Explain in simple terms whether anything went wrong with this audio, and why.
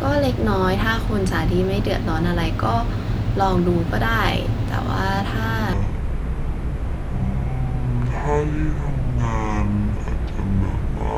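From 5.73 s onward, the speech plays at 0.56 times normal speed, about ten semitones deeper. This section at the wrong speed likely came from a clock mismatch.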